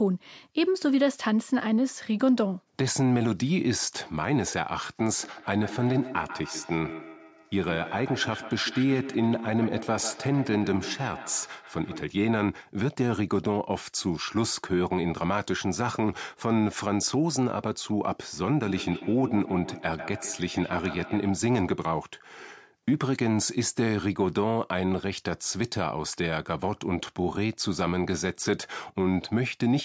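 From 5.23 to 12.18 s and again from 18.65 to 21.44 s, feedback echo between two devices makes speech return roughly every 150 ms, peaking at about 12 dB below the voice. Unlike smooth room reverberation, the repeats arrive as distinct copies at that fixed spacing.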